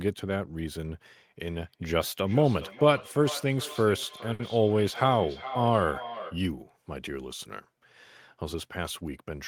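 Feedback echo between two devices runs from 1.47 to 6.45 s: a second device in the room plays back this speech, the original microphone recaptures it, and each phrase returns roughly every 0.4 s, thinner and ringing, peaking about 14 dB below the direct speech.

A short stall from a late packet comes at 4.33 to 4.42 s: a packet arrived late, so the receiver held the last sound for 60 ms until it came, then resumed with nothing lost, leaving a briefly frozen sound.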